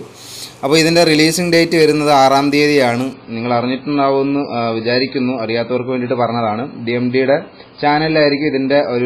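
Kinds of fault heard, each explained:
Adaptive stream at a lower bitrate: At 3.13 s the sound turns abruptly duller and thinner, with nothing above 5 kHz and a smeared, swirly codec texture that lasts to the end of the clip. Playback never pauses or breaks. The stream has switched mid-play to a far leaner encoding of the same audio, and the sound points to a step down from a high-quality MP3, around 128 kbit/s, to one near 16 kbit/s.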